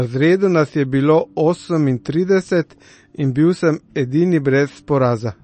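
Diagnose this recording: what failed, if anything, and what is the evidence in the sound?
The speech sounds dull and watery from start to finish, with nothing above about 8.3 kHz, so the s sounds lose their sharp top and swirl. Both symptoms point to the codec stage, most likely MP3 compression at a low bitrate, around 32 kbps. Short of bits, the encoder cuts the treble at a fixed point and drops weaker frequency lines that flicker between frames, which leaves the damage plainly audible.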